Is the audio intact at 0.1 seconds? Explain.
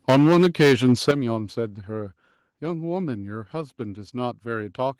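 No. At 0.1 seconds the speech is distorted by microphone overload, which runs from 0.08 to 1.11 s. The peaks are squared off with a harsh, crackling edge on the loudest syllables, likely because the input volume was set too high and drove the converter about 10 dB past its ceiling. Their tops are flattened at the converter's limit, and a substantial share of samples, on the order of one in seven, sits pinned there.

Also at 0.1 s, the microphone volume is stepped down: voice and background drop together by about 4 dB in a single abrupt step, right inside the distorted opening. This is likely the call software reacting to the clipping by lowering the device's input volume in one move.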